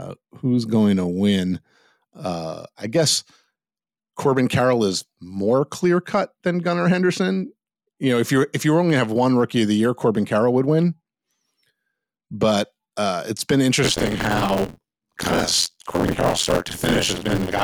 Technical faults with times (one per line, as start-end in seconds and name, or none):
13.84-17.63 buffer tearing